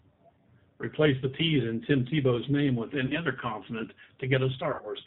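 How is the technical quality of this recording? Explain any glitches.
The technical quality is limited: the speech is carried through a low-bitrate telephone codec, and two brief dropouts near the end are papered over with synthetic sound.

Throughout, the voice sounds slightly rough and synthetic, with nothing above 4 kHz, so sibilants are dull and airless. This is the G.729 codec, and the damage is plainly audible. Rather than storing the waveform, it rebuilds speech from a vocal tract filter, a pitch predictor and a few pulses per short frame. The result fits the 8 kbit/s G.729A variant.

At 3.06 to 3.19 s, and again at 4.73 to 4.92 s, the speech briefly smears into a stretched, buzzy tone or coloured noise that fades before normal sound returns. This is VoIP packet loss concealed by the speech codec. When packets went missing, the decoder kept extrapolating from its last pitch and filter settings and lowered the level as it went. 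The first gap is about 40 ms of lost audio. The second loses about 80 ms, scattered over 140 ms, with the longest single run about 60 ms. Because each frame builds on the previous one, the voice stays weak or distorted briefly after each gap.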